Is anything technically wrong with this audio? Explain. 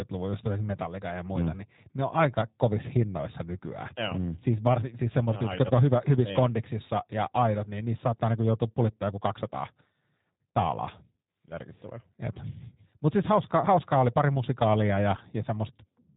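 Yes. The speech carries G.729 codec damage from start to finish. The codec rebuilds each 10 ms frame from a vocal tract filter, pitch predictor and a few pulses, a sparseness that fits 8 kbit/s. It sounds plainly rough and synthetic, and a spectrogram shows nothing above 3.8 kHz.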